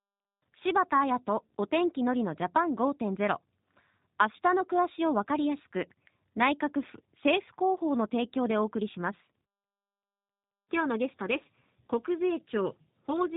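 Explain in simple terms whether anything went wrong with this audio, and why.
The whole speech clip went through the G.729 codec, a phone-call compressor that rebuilds the voice from a simplified model. Nothing above about 3.8 kHz survives, and speech sounds rough and synthetic, not just muffled, which is what distinguishes it from plain bandwidth limiting.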